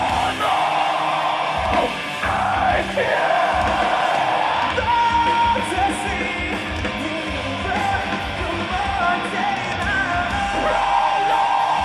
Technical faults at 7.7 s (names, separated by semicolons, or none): none